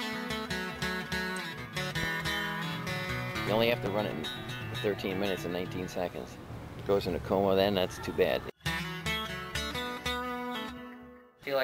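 At 3.86 s a loud pop cuts in and is gone by 3.89 s. It lands as a single sharp crack, roughly 15 dB above the surrounding sound. The audio carries on beneath it without a break. The likely cause is a sudden voltage jolt entering the signal chain, from a plug, a switch, static discharge or a driver glitch. The circuits downstream shape that step into a brief pulse, which is what we hear.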